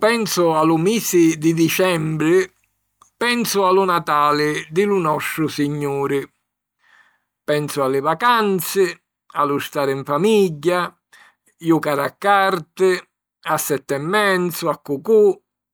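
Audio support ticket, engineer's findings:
No audible faults found; speech path clear throughout.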